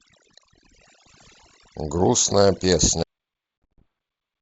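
Throughout the clip, overdone noise removal has pushed the noise reduction far too hard. Whenever a frequency band sits near the tool's noise estimate, it is switched down or off, taking the quieter parts of the speech with it. The gaps between phrases fall to near silence with twinkling specks. On a spectrogram the background becomes a dark field scattered with isolated bright dots, and the speech harmonics look ragged and patchy instead of continuous.

At 3.03 s the clip has a cut-off end. The final stretch of audio was never written out, so the sound stops mid-utterance and drops straight to digital silence with no decay. It sounds abrupt, like a line going dead. In the waveform, the signal ends in a vertical edge followed by a flat line. In the spectrogram, every frequency stops at the same instant, with no tail fading away.

From 3.64 to 3.82 s there is packet loss on the ADPCM call, which runs over G.722 wideband coding at 64 kbit/s. 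About 160 ms is missing, spread across 200 ms. The gaps are filled with silence, and the longest single gap is 60 ms, which suggests a dozen or more lost packets. Each hole has hard edges. The decoder's predictor and step size fall out of step with the sender's, so the audio resumes slightly distorted and settles within tens of milliseconds. This shows as sharp vertical gaps in the waveform.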